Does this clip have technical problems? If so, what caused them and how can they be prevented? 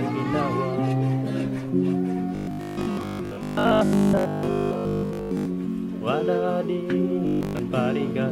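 Yes. Robotic sound from repeated short buffers runs from 2.35 to 5.47 s and again from 7.27 to 7.59 s: a rigid 50 Hz metallic buzz, likely from audio arriving too seldom, so a 20 ms slice is replayed repeatedly while most of the real sound is skipped. Larger buffers and steadier audio delivery prevent it.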